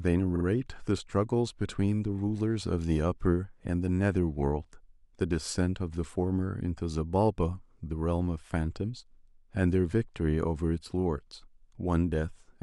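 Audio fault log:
0.35–0.44 s, repeated frames: right near the start of the speech there's a quick stutter where a 46.4 ms slice of audio plays again twice over, so the same fragment is heard three times back to back. That points to a short run of compressed frames, about two of them, being written or sent more than once, and the decoder just replayed them. It stretches the clip by roughly 93 ms.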